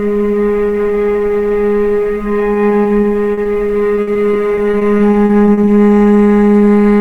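Repeated packet loss (robotic sound) hits the audio twice. The first stretch runs from 2.53 to 3.47 s, with six short dropouts of up to 40 ms. The second runs from 3.95 to 5.69 s, with fourteen dropouts of up to 60 ms. Each missing piece is covered by stretching the preceding sound, so the audio turns choppy, with pieces missing. About a fifth of the second stretch is patched this way.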